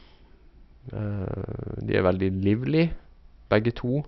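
No technical faults are audible anywhere in the speech recording.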